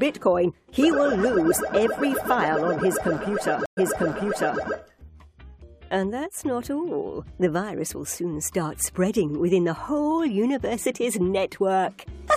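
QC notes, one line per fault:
3.66–4.61 s, stream reconnect: the audio drops out for about 112 ms, then picks up again 836 ms earlier than where it cut, so you hear a short stretch of sound repeat. That's the connection breaking and the player reconnecting mid-stream with a fresh decoder. The server resent a burst of already-played material on reconnect, which is why it jumps back instead of skipping ahead.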